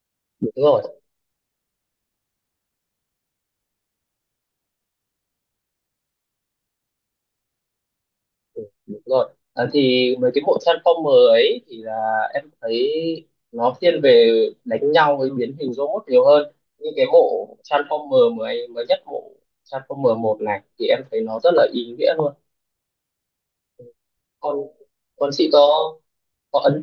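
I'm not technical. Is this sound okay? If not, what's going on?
Yes, the recording is technically sound, with nothing wrong in how the audio signal was captured or carried.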